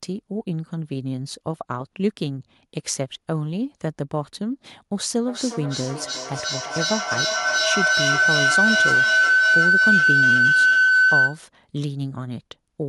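It's a speech recording, and from 5.25 s to 11.45 s it runs into a feedback howl. You can hear a loop building between two devices sharing a room on the same call: each pass from loudspeaker back into microphone comes back louder, narrowing onto a tone somewhere around 1.5 kHz that pulses roughly every 400 ms. At its peak it sits about 8 dB above the speech before the loop finally breaks.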